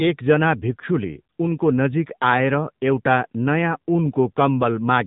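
From start to finish the speech runs through an AMR narrowband mobile codec, with nothing above about 3.8 kHz surviving, so it sounds boxy and phone-like. The plainly audible buzzy, synthetic edge points to a low AMR-NB rate, roughly 8 kbps, starving the vocal-tract model of pulses.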